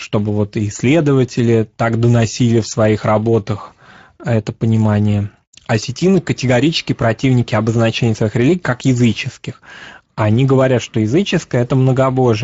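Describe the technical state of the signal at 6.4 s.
Speex codec damage runs through the whole clip, including 6.4 s. At about 17 kbps, CELP's sparse excitation leaves the speech plainly hoarse and noisy.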